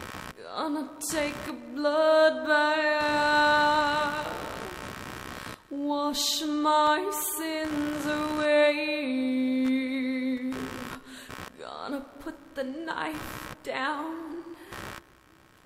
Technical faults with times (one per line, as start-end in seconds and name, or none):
0.00-15.65 computer activity noise